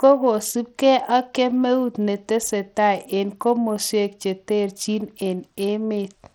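From start to finish the speech has likely passed through Bluetooth SBC compression with a starved bit pool, which fits a rate near 80 kbps. The upper sub-bands get too few bits, so the treble flickers and drops away while gritty quantisation noise and aliasing cling plainly to the sound.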